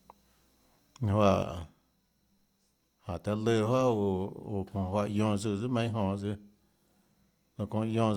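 A speech recording where, from about 1.43 s to the end, the level drops abruptly by about 6 dB, likely one stereo channel dropping out before the mono sum.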